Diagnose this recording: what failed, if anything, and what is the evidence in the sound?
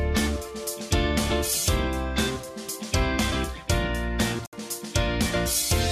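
The digital broadcast receiver failed at the reception and decoding stage: the incoming frames stopped arriving intact or failed their integrity check, so the decoder muted rather than play corrupted data. From 4.46 to 4.53 s the audio drops to silence through a very fast fade of about 3 ms, leaving a 64 ms hole, which fits roughly two lost frames. When valid frames resume, the sound returns further along. The material sent during the gap is gone.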